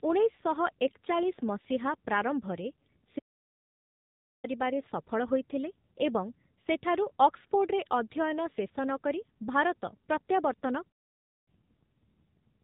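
From the start the speech has the AMR narrowband mobile codec sound: nothing above about 3.8 kHz, and at a bitrate that fits roughly 7.4 kbps the vocal-tract model runs short of pulses, so the voice comes out plainly buzzy and synthetic. At 3.18 s the audio just stops for about 1.25 s, picking up again at 4.45 s. That's a playback stall, likely the player starving for data. A shorter stall, about 0.58 s, follows from 10.88 to 11.48 s.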